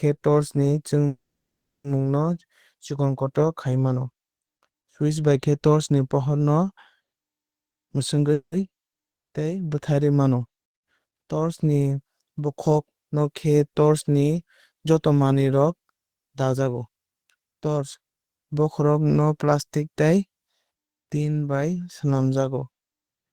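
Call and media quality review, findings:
Call audio freeze, 1.07–1.87 s: 0.77 s inserted gap. A fading fill decays to about 0.67 s of silence, then speech resumes exactly where it stopped, with nothing skipped. Likely delayed packets draining the jitter buffer.

Jitter buffer speed-up, 7.65–8.32 s: speech rushed to 129% at unchanged pitch, roughly a fifth of a second trimmed as repeated pitch-period cuts. Pitch stays unchanged, unlike a resampling error.

Call audio freeze, 8.33–8.55 s: 0.19 s gap, brief fill then about 0.09 s silent. Speech continues intact, likely from another packet delay right after the catch-up.

Long network dropout, 9.12–9.35 s: 0.2 s of silence. Unlike the freezes, speech returns further on with that 0.2 s missing. Likely packets lost in transit, never received.

Jitter buffer speed-up, 16.54–17.83 s: milder hurrying at 112%, same pitch, about 0.15 s removed over 1.3 s. 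The pacing shift is gentler and longer than at 7.65 s.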